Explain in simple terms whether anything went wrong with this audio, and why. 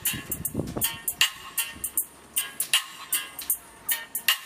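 Audio missing between chunks, at about 3.39 s: the sound jumps forward with a tiny skip, because a few hundredths of a second, roughly 30 milliseconds, have gone missing and the two sides are butted straight together with no gap of silence. The likely cause is a recorder or processor handling the audio in one-second pieces and dropping a sliver of sound while it closes one piece and starts the next.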